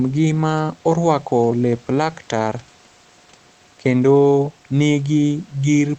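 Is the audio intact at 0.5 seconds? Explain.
Yes, the speech at 0.5 seconds is intact, with no fault at that moment.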